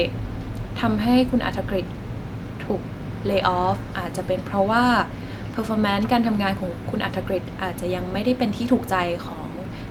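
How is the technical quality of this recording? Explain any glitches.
No technical glitches are audible.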